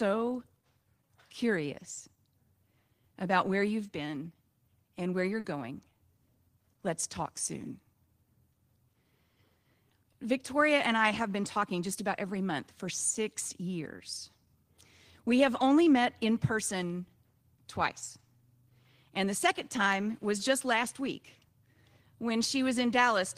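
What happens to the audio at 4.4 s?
Nothing goes wrong at 4.4 s; the speech plays through that moment intact, with no dropout, glitch or distortion.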